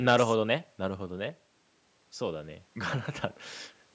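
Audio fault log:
No faults detected.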